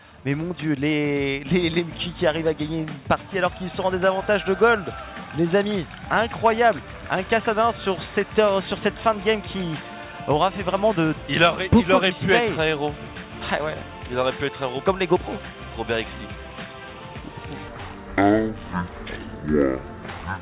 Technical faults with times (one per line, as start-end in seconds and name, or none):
17.68-20.41 wrong sample rate